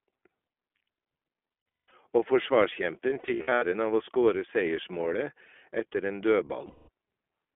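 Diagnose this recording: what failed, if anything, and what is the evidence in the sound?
iLBC codec damage, throughout: the codec stage confines this speech to a 250 Hz to 3.4 kHz telephone band, with a rough, synthetic edge. iLBC codes each 20 ms frame's excitation independently, and the texture fits its 15.2 kbps mode.

Lost iLBC frames, at 1.76 to 1.92 s, 3.10 to 3.64 s and 6.66 to 6.89 s: a network-stage failure. The gaps turn into held, buzzy vowel sounds as the decoder repeats the last pitch cycle with noise. The first burst loses 340 ms scattered across 400 ms, with a run of about a fifth of a second. The second loses 320 ms scattered across 520 ms, in short runs. The last loses 220 ms. The voice comes right again almost at once after each.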